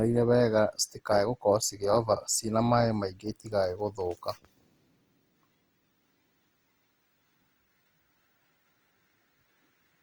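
Opus compression throughout the clip: the speech sounds grainy and rough, likely from an encoder that, starved of bits near 24 kbps, fills bands with folded copies or noise.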